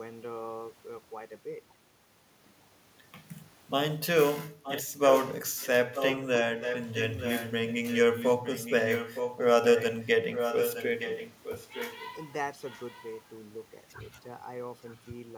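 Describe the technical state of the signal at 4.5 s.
Right at 4.51 s the speech briefly ducks, dipping by roughly 5 dB until about 4.64 s. That's speech suppressed in double talk, likely an echo canceller confusing the talker with far-end echo while both sides spoke, and turning everything down for a moment.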